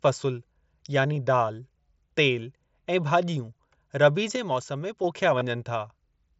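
At 1.15 s, concealed Bluetooth headset packet loss covers about 15 ms, and again from 5.39 to 5.41 s for about 22.5 ms. The missing stretches, which fit two and three lost headset frames, are filled by repeating recent waveform. So instead of a silent dropout, each gap is a brief buzzy, steady tone that ends in a slight warble.

From 4.36 to 5.04 s there is a sudden gain jump. The speech and the background noise both drop by about 5 dB at once, with no ramp, and step back up together at the end. That abrupt step, rather than a gradual fade, points to a likely unramped digital gain change. The wideband mSBC headset path stays audible throughout as light graininess on louder sounds.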